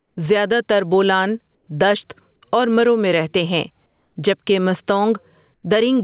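Gain pumping runs through the whole clip. The background swells by around 10 dB in each gap and ducks under every loud stretch, likely from gain set far too high with a fast limiter pulling it down. On the waveform the noise floor visibly breathes, and the peaks look flattened.

Comfort noise in place of the background appears at 0–0.17 s before "زیاده تر بولان دشت", at 1.55–1.67 s between "زیاده تر بولان" and "دشت اور مرو میں", at 3.86–4.16 s after "مرو میں رهتے هیں", and at 5.54–5.63 s. The likely cause is discontinuous transmission, with synthetic fill replacing the real room tone. Each patch is steady, featureless hiss, about 6 dB quieter than the surrounding background (about 3 dB at 3.86 s). On a spectrogram these patches show as smooth, textureless blocks. Across the whole clip the spectrogram is blank above 4 kHz, consistent with the narrowband call codec.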